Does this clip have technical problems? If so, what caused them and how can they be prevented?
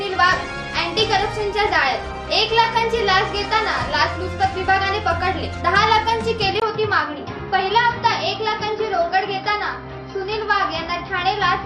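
Yes. At 6.60 s the sound turns dull and boxy and stays that way to the end. A brief gap of about 20 ms marks the change. After it, nothing is heard above 5.8 kHz. A faint new background noise appears, well below the signal, while the overall level stays about the same. This points to an input switched to a poorer device, likely a fallback microphone or a headset call profile. To prevent it, lock the input device before recording.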